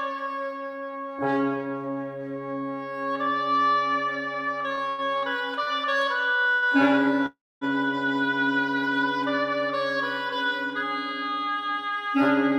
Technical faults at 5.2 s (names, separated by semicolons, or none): short stall from a late packet